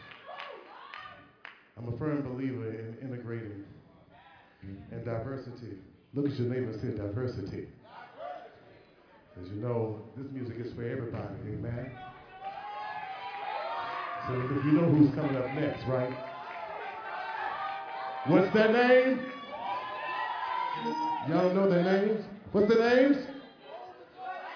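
Nothing stood out as a technical problem on listening.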